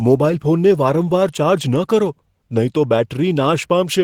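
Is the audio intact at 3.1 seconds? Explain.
No. Opus voice compression runs through the whole clip, including 3.1 s. The lower band comes from a linear-prediction coder with a thin transform layer above 8 kHz, and the coarse, low-rate coding (consistent with roughly 16 kbps) leaves the speech plainly hoarse and slightly robotic.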